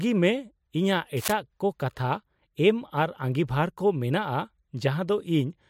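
Cable scratch noise runs from 1.16 to 1.33 s, a brief burst of dense, uneven scratching over the speech, roughly 10 dB below it. The likely cause is a worn cable or connector carrying DC being moved, making its contact resistance fluctuate rapidly.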